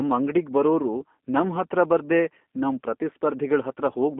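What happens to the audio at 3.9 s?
At 3.9 s the speech still carries the G.729 codec damage present across the whole clip. Its content is confined to roughly 200 Hz to 3.5 kHz, and the sound is rebuilt from a vocal-tract filter and sparse pulses, which fits an 8 kbit/s G.729A stream. Unlike a simple telephone band filter, it adds a rough, buzzy, synthetic texture.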